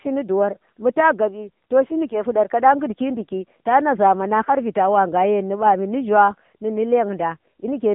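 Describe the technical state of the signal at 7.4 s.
AMR narrowband mobile codec damage is present at 7.4 s, as it is throughout the speech. The sound is squeezed into a roughly 150 Hz to 3.5 kHz band with nothing above 3.6 kHz, and the plainly buzzy, synthetic vocal-tract rendering fits the low 7.95 kbps mode.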